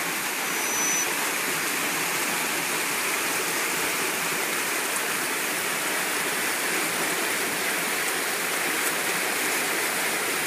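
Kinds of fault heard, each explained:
Loudspeaker feedback squeal: from 0.37 to 1.07 s, a 6 kHz tone swells over about half a second to roughly 5 dB above the sound. A microphone is picking up its loudspeaker, and at that frequency the loop gain exceeds one, so it feeds itself.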